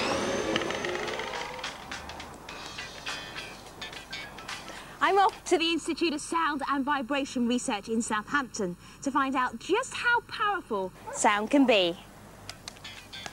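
From 5.58 s to 10.95 s the audio turns hollow and phasey: this is channel delay (comb filtering). One channel arrives about 0.7 ms behind the other, and when the two are summed to mono their shared content cancels at evenly spaced frequencies, the first notch falling around 700 Hz. On a spectrogram this shows as fixed dark horizontal bands stacked up the spectrum for that stretch.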